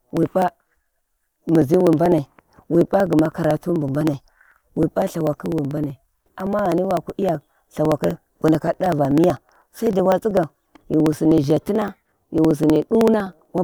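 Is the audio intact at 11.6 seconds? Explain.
No. Around 11.6 seconds the audio falls within a run of periodic USB or driver dropouts lasting from 0.11 to 13.58 s. Every 63 ms something stalls the USB bus or audio driver, and roughly a millisecond of the speech is skipped outright rather than padded with silence. Each skip joins two mismatched points in the waveform, so the speech carries a steady ticking of about 16 small clicks per second, heard only while there is signal.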